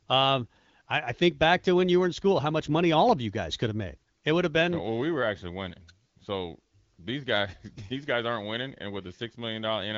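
No faults are audible: the speech runs through AMR wideband (HD Voice) coding, with nothing above 7.5 kHz and a clarity that fits one of its upper rates, around 15.85 kbit/s.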